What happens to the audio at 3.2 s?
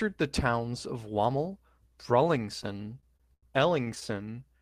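The speech drags and stutters from 2.63 to 3.45 s: ten short holds, the longest 90 ms, stretching the sound by about 213 ms with nothing lost. These repeated stalls (stutter) come from late packets draining the jitter buffer, so the receiver extends the last sound until data arrives.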